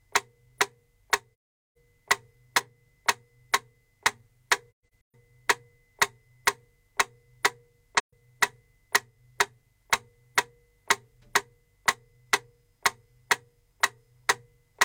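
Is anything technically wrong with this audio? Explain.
Yes. AAC frame loss with muting: the decoder zeroed the missing frames, so the sound fades out and back in around soft-edged gaps at 1.35–1.78 s, 4.71–5.15 s (several short gaps, the longest about 0.15 s) and 7.98–8.14 s.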